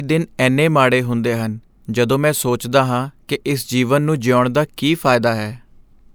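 No technical faults detected in this speech recording; nothing to flag.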